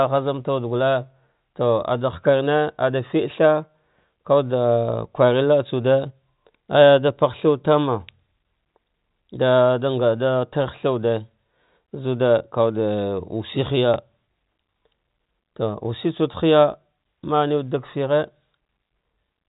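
At 13.94 to 13.96 s, packet loss with last packet repeated: one stretch of audio, which fits a single 20 ms packet, never arrived, and the receiver replayed the previous packet to fill it. The repeated packet gives a small blip over the narrowband G.711 telephone sound.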